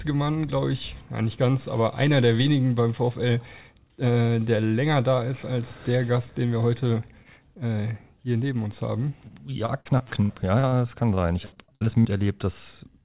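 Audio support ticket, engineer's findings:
Repeated packet loss (robotic sound), 9.28 to 10.75 s: choppy stretch with roughly nine short holes, longest about 76 ms. Jitter buffer stretching the last packet over each gap, about a fifth of the span patched.

Same again, 11.15 to 12.07 s: around eight holes, longest about 71 ms, over a quarter of it concealed. Nothing above 4 kHz throughout, which fits G.711 mu-law at 64 kbps on the call leg.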